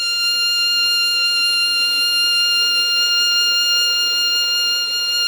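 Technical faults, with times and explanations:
Nothing stood out on listening to this music clip.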